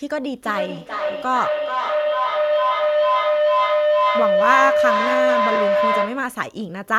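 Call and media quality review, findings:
Sample clock jitter, throughout: faint hiss and roughness riding on louder, brighter speech, absent in pauses. Probable component: converter clock. Timing wander of under a microsecond leaves slope-dependent error around 50 dB below the signal.

Feedback howl, 0.43 to 6.45 s: tone near 700 Hz building over the speech, peaking about 2 dB above it, pulsing roughly every 0.4 s. Probable component: second device in the same room on the call. The mic-to-speaker loop gains level each pass.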